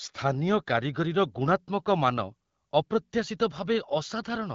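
The speech carries the light coding marks of an AMR wideband (HD Voice) path at a rate consistent with 12.65 kbit/s, and no technical faults can be heard in it.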